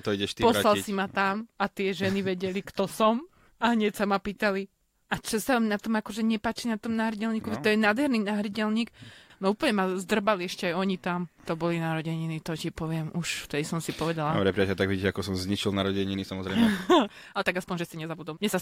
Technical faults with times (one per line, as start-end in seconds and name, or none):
16.09-18.62 time-stretched section